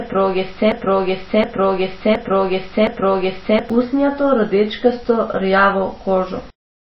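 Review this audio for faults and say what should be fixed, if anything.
The clip opens mid broken-record loop: a 0.72 s fragment repeats four times back to back until 3.70 s, just before "usnjato rdečkasto rjavo", so the speech that belonged there is gone. The likely cause is a stalled player or stream resending its last buffer. Add stall detection that drops out or resyncs instead of replaying stale audio.

Throughout, the speech sounds watery and swirly, with nothing above 5.8 kHz. That's likely heavy MP3 compression, fitting something near 24 kbps, where the encoder cuts the treble and flickers weak bands. Encode at a much higher bitrate, or keep a lossless master.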